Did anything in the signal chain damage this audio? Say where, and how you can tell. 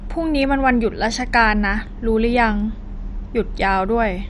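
Yes. The damage sits at the codec stage and runs through the whole speech clip: the sound is dull, with nothing above 11.3 kHz, and carries a gurgling, granular roughness where upper sub-bands flicker on and off and the remaining bands are coarsely quantised. This points to MP2 compression, likely starved of bits at a rate that fits about 48 kbps. A plain low-pass filter would dull the top without that grainy, flickering texture.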